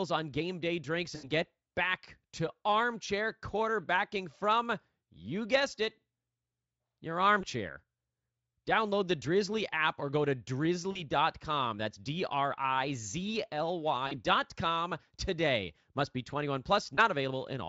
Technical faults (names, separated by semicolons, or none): VoIP packet loss concealed by the speech codec